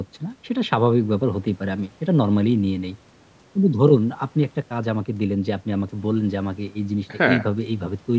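No technical faults are audible.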